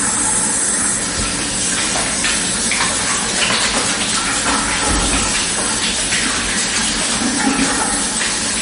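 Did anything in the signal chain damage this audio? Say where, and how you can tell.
Yes, the damage points to the codec stage: the audio was likely squeezed through MP3 compression at a very low bitrate, somewhere near 37 kbps. Throughout the clip nothing remains above about 10.6 kHz, where the encoder cut the treble to save bits. With so few bits, weak frequency lines get zeroed and flicker on and off from frame to frame. You hear that as a plainly audible watery, swirling texture, with smeared attacks.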